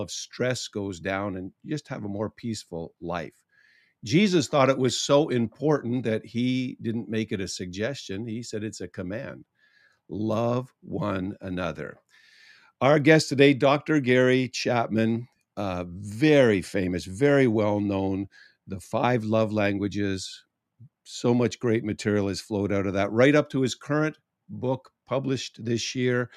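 No technical faults are audible.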